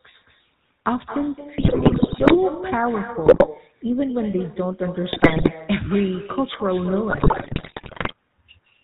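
From the start the speech has that buzzy, gravelly GSM full-rate codec texture, with nothing above 4 kHz and a rough, pulse-driven excitation. The damage is plainly audible and sounds like the 13 kbps full-rate coder at work.

Running through the whole clip is echo with no canceller: every phrase comes back roughly a fifth of a second later, about 11 dB down and thinner. That's the far end's loudspeaker feeding its mic with nothing stripping it out.

Then come the GSM bit errors, in bursts from 1.58 to 2.36 s, 3.26 to 3.48 s, 5.12 to 5.51 s and 7.1 to 8.14 s. Corrupted filter, pitch and gain values turn the speech into squawks, pops and gargling. The last burst has the highest error rate, near 9 percent.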